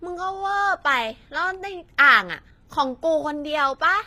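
From start to finish the speech carries plainly audible damage consistent with HE-AAC compression, likely at a low rate around 24 kbps. The lower spectrum sounds coded directly, while the treble above the crossover has been regenerated from copied lower bands under a coarse envelope. The top end stays bright but its harmonics don't line up with those below, so s sounds come across gritty, metallic or lispy.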